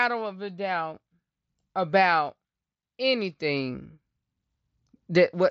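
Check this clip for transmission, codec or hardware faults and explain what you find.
Nothing stood out on listening to this speech clip, which comes over a Bluetooth mSBC headset link with its content stopping at about 7.2 kHz.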